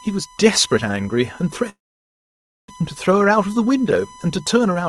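A steady 1 kHz whine sits under the speech the whole way through, roughly 25 dB below it. That's USB whine: the bus's 1 ms frame activity is getting into the audio through power or ground, so you get a fixed-pitch tone.

From 1.69 s to 2.71 s there's a call audio freeze. The sound briefly carries on as a fading tail, then drops to near-silence for about 0.93 s before picking up where it left off. Nothing's lost, but everything after lands about a second late. Likely the jitter buffer ran dry while packets were held up.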